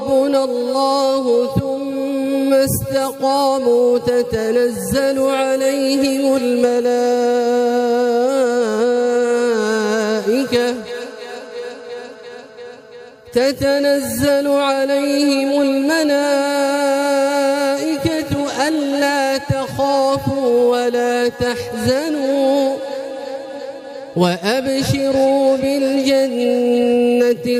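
No faults can be heard anywhere in this recording.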